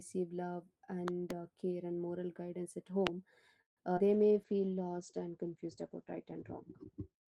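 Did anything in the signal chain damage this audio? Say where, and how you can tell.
Yes, several stages left marks.

Loud pop: Two sharp pops land between 1.08 and 1.33 s, around 15 dB above the speech, just before "uh care and moral". A single harder pop at 3.07 s, around 25 dB up, follows "and moral guidance at". The speech continues underneath each one, so something was added to the signal rather than cut from it. That points to the analogue wiring or a driver, where a likely voltage step from a plug, switch or static discharge hit the line and was shaped by the circuits after it.

Call audio freeze: At 3.61 s the speech stalls. The last sound is stretched into a short fading buzz, then silence for about 130 ms. At 3.79 s it resumes exactly where it stopped, with nothing lost, so the timeline has gained 154 ms. This is network and jitter-buffer behaviour. Packets were likely held up in transit, the buffer ran dry, and the receiver filled the wait until they arrived.

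Skip ahead: At 3.97 s playback jumps forward. Roughly 70 ms of speech is gone, and the two sides are butted together with no gap. This is the opposite of the freeze. Audio was already queued behind a dropped stretch, so the jitter buffer discarded it and caught up, cutting back the delay that the freeze had just added.

Short concealed packet loss: Immediately after, at 3.99 s, another 20 ms is missing. It is heard as a brief smear at the join rather than a clean gap. This is a second lost packet at the decoder. The receiver had nothing to play for that slot and simply stitched the neighbouring audio together, trimming a little more delay. That brief joint is also where a short consonant could drop out.

Call bitrate drop: From 4.05 s to the end the speech turns rough, watery and muffled. The encoder went from 32 to 12 kbps and stayed at the lowest rate for about 2.1 s. The audible top end shrinks from 20 kHz to 8 kHz, which is why sibilance dulls. 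This is the codec stage. The call's bandwidth estimate fell, and Opus was told to code coarsely and band-limit.

Jitter buffer slow-down: Between 4.27 and 4.76 s the speech drags to about 88% speed at unchanged pitch, with drawn-out vowels. About 65 ms was added in total. The receiver was rebuilding its reserve after the skips by repeating single pitch periods back to back, which stretches time without shifting pitch.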